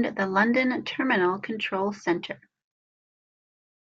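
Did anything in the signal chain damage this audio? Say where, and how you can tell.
No, nothing in this speech recording points to damage at any stage of the signal chain.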